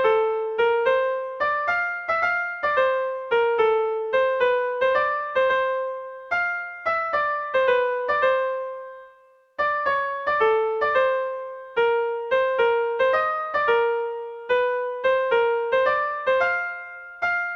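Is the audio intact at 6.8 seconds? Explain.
Yes, at 6.8 seconds the audio is intact, with no dropout, click, distortion or other fault to be heard there.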